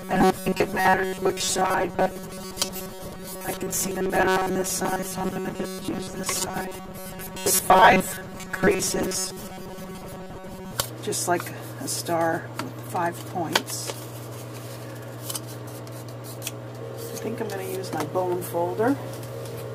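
From 0.01 s to 10.73 s the audio has a robotic sound from repeated short buffers: a rigid, metallic buzz fixed at 188 Hz. Most of the time is filled by repeating a chunk of about 5.3 ms, likely because new audio arrived too seldom.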